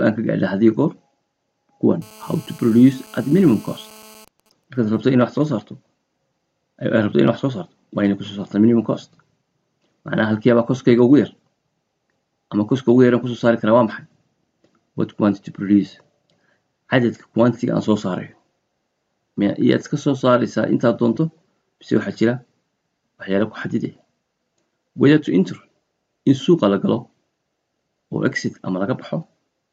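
GSM phone buzz runs from 2.02 to 4.25 s: a nearby 2G phone in an active call is transmitting in bursts about 217 times a second, and the audio circuitry rectifies them into a hard, raspy 217 Hz buzz full of harmonics, about 26 dB below the signal.

GSM signalling bursts follow from 4.28 to 5.48 s, consistent with the same call with its talker now silent. The phone sends only short groups of bursts, which get rectified into faint, even ticks with a longer 217 Hz buzz twice a second, roughly 40 dB down.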